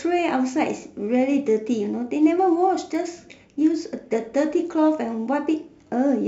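A bit error spike occurs at 2.95 s in this speech recording: three consecutive samples jump sharply away from the waveform and snap straight back, peaking at about -33 dBFS. A single flipped bit in a stored or transmitted sample value throws the number off by a power of two, and because the excursion lasts only a few samples its energy spreads across the whole spectrum. It comes through as one brief, dry tick with no connection to the speech around it.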